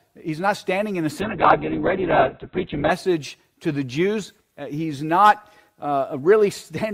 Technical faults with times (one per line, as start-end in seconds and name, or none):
1.21-2.97 call bitrate drop